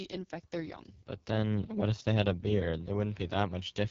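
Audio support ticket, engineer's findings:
Rough, raspy speech throughout, nothing above 7.5 kHz; AMR wideband (HD Voice) codec at its lowest mode, likely 6.6 kbit/s, starving the pulse-driven vocal tract model.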